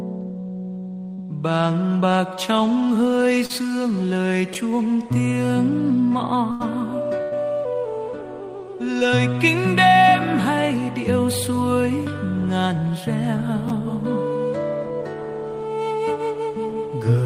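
Short concealed packet loss occurs at 1.13–1.20 s, 3.46–3.51 s and 8.99–9.03 s. About 40 ms, 40 ms and 20 ms of audio never reached the decoder in time, so the receiver extended the preceding sound and blended back. Each gap is heard as a brief smear or wobble.

Chunks out of order appear at 4.53–4.55 s and 13.68–13.70 s. In each, a 10 ms chunk landed one position late and plays after the chunk that should follow it. The hard joins give a tiny jumbled moment.

A burst of packet loss strikes at 6.51–6.62 s and again at 7.22–7.33 s, dropping 80 ms and then 100 ms. The receiver held the last sound and faded it across the gap, so each becomes a short fading buzz or hiss before the audio resumes further along.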